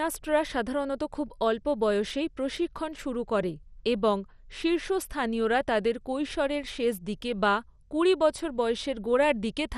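MP2 compression, throughout: the speech stops at 14.3 kHz and has a gurgling, granular edge, likely from Layer II sub-bands starved of bits at around 64 kbps.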